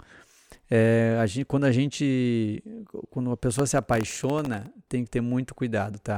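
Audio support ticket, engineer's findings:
Processor overload crackle, 3.59–4.72 s: CPU missing sub-millisecond buffer deadlines about thirty times, replaying stale audio with hard edges, gritty tearing over speech until load drops.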